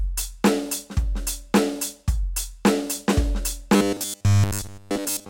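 From 3.76 s to the end at 5.29 s, the music turns into a rigid, metallic buzz pitched at 100 Hz, loosely tracking the original. This is robotic sound from repeated short buffers, likely from a 10 ms slice being replayed to cover most of the stretch.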